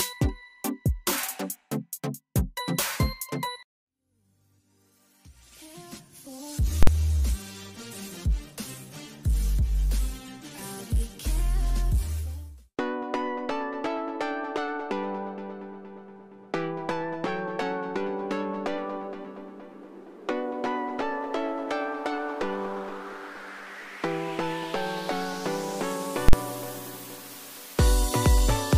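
At 6.83 s and 26.29 s, invalid numbers at full scale pin the output to the rail for about 46 ms, which fits a 2048-sample block. Each is heard as a single bang, seen as a flat clipped slab and a broadband vertical stripe.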